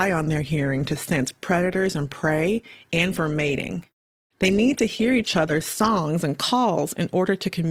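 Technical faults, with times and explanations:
0.0 to 6.0 s, adaptive stream starting at a low bitrate. The speech opens dull, with the treble missing or sounding synthetic and codec artefacts stronger. The player began on a cheap version of the stream so playback could start fast. It then measured the connection and switched up. At 6.0 s the quality jumps suddenly, with no gap. The sound points to roughly a 16 kbit/s Opus start stepping up to about 64 kbit/s.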